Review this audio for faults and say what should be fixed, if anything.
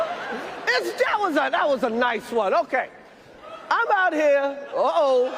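Nothing here needs fixing: the signal holds steady throughout, with no dropouts, level jumps, added noise or disturbances of any kind that would call for a repair.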